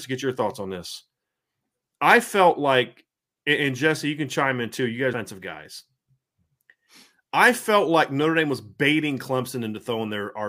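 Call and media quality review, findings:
CD skip at 5.13 s. Symptom: brief tick, then the speech resumes from a different point, with continuity broken. Mute of a few milliseconds only. Probable component: optical disc playback in the source chain. Mechanism: a knock or disc flaw jumped the laser tracking to another turn of the spiral. Short mute, then playback continues offset by whole disc revolutions.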